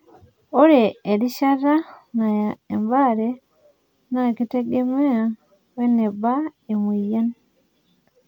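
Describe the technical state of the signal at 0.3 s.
At 0.3 s the speech signal is intact, with no technical fault present at that moment.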